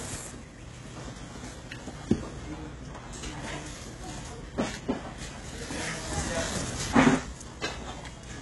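Everyday sounds throughout show heavy HE-AAC compression damage, likely from spectral band replication: the treble sounds synthetic, gritty and metallic, with nothing above about 11.5 kHz, which fits a bitrate near 12 kbps. A spectrogram shows a hard ceiling and smeared, copied-looking upper bands.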